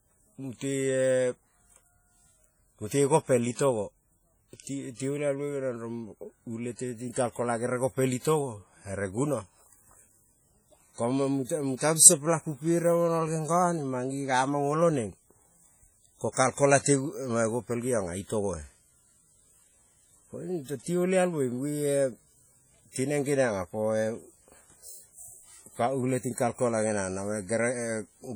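This speech recording was most likely passed through a low-bitrate codec first and then saved at a high bitrate. The sound points to roughly a 32 kbit/s WMA stage followed by an MP3 encode at around 194 kbit/s. That second, generous encoding cannot restore what the first one discarded, so the coarse coding artefacts of the earlier pass remain throughout. Content stops at 20.1 kHz, which makes the file look better than it sounds.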